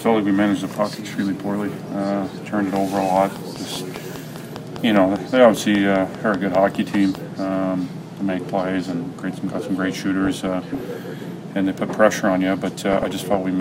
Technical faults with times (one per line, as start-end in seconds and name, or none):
2.76-7.16 train of clicks
10.25-10.87 DAB burbling
12.91-13.36 DAB burbling